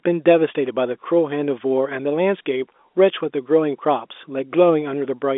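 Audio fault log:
No faults are heard in the clip. The speech carries G.711 telephone coding, sitting in a line band of about 250 Hz to 3.6 kHz with nothing above 3.8 kHz, which fits 64 kbps A-law.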